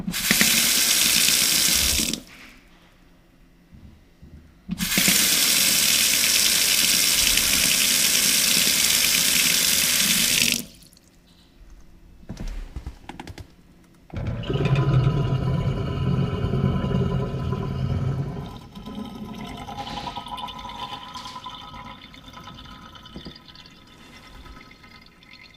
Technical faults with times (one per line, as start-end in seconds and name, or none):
0.00-25.56 doubled audio track